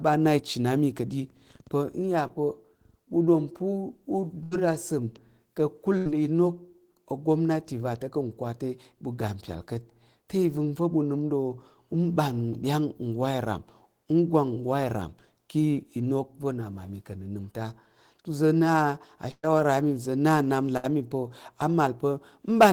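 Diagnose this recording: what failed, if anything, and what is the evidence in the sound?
Short concealed packet loss at 2.27 to 2.31 s, a network fault. About 20 ms of the speech arrived too late for the decoder, which bridged the hole by extending the preceding sound and then crossfading back into real audio, leaving a brief smear.

Burst of packet loss, also on the network, at 4.43 to 4.53 s, 5.97 to 6.07 s, 19.31 to 19.45 s and 20.77 to 20.85 s. Each gap, 60 to 120 ms of lost packets, is covered by a fading continuation of the last sound. The 19.31 s gap runs long enough to drop to silence for its final 40 ms before speech resumes further on.

Hard clipping at 22.61 to 22.70 s, from a gain stage or converter driven about 6 dB past its ceiling. The waveform peaks are sliced flat there, adding high harmonics that come through as crackle on the peaks near the end.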